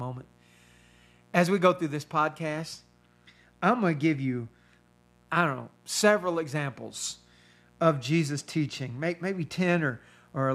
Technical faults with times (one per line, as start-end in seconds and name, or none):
0.00-10.54 mains buzz